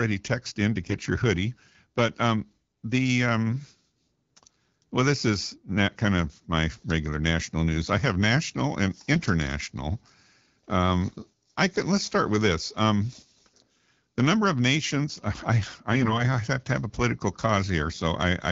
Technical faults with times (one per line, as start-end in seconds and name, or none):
0.80-0.95 AMR bit errors
9.15-9.28 AMR bit errors
15.92-16.24 AMR bit errors
17.84-18.00 AMR bit errors